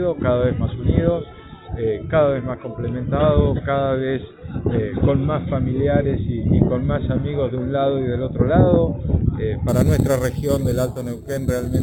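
From 9.68 s to the end, samples were repeated without smoothing, consistent with 8 kHz audio upsampled, causing imaging from sample-and-hold upsampling: a mirrored metallic fizz at 4 to 8 kHz, about 22 dB below the sound.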